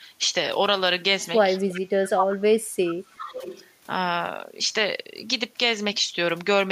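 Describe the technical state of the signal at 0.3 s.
At 0.3 s the speech signal is intact, with no technical fault audible at that moment.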